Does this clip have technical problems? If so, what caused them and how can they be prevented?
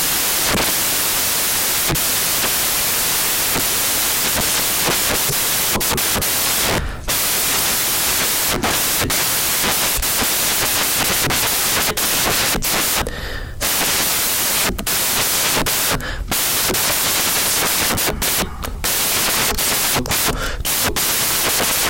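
Yes. Throughout the speech, samples built from the wrong bytes turn the signal into loud white noise, because each sample's fast-changing low byte lands in the high position and dominates its value. Prevent it by declaring and checking byte order and sample alignment when reading.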